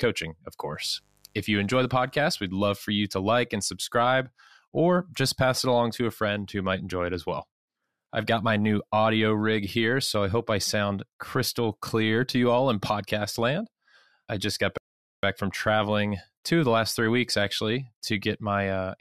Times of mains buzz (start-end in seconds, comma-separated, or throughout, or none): 0.74-2.41